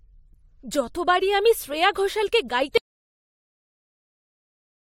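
At 2.78 s, right after "যতবার আমি শ্রেয়া ঘোষালকে", an audio dropout to silence cuts the speech off. Dead silence, no room tone, runs to the end. Likely a lost input.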